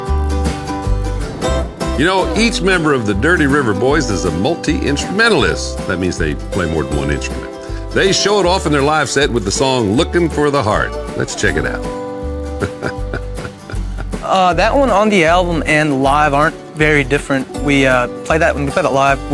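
Resampler restarted on every block runs through the whole clip: a buzz at 50 Hz rides on the audio wherever there is signal. The conversion from 48 kHz down to 24 kHz was done block by block, each block treated as if nothing came before or after it, so every edge carries a small error. Those edges fall every 20 ms, which fits blocks of about 960 input samples, and the repeated ticks merge into the buzz.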